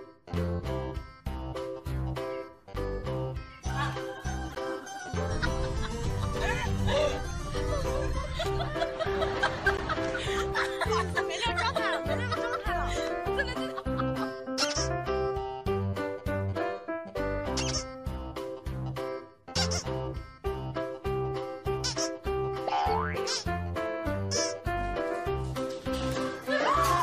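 Brief chirpy bursts of noise at 4.50 to 4.58 s and 9.73 to 9.80 s, the second a little louder, are corrupt frames decoded: damaged bits in a few compressed frames misplaced energy across frequencies.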